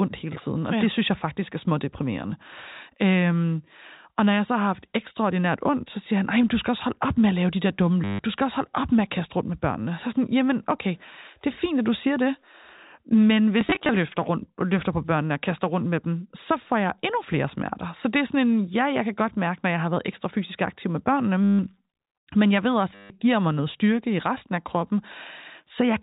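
At 8.04 to 8.19 s, 21.44 to 21.59 s and 22.95 to 23.10 s, packet loss with the last packet repeated gives a 100 Hz buzz, fitting 10 ms packets. At 13.61 to 13.89 s, shorter scattered repeats make a scatter of small blips.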